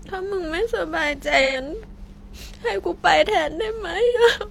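At 1.42 to 1.62 s and again at 4.06 to 4.18 s the speech turns briefly smeared and noisy. This is AAC frame loss with concealment. Roughly 128 ms and 85 ms of coded audio went missing, and the decoder rebuilt those gaps from the last good spectrum. Unlike a plain dropout, there is no hard gap of silence and no click. The sound keeps going as a blurred, phasey wash.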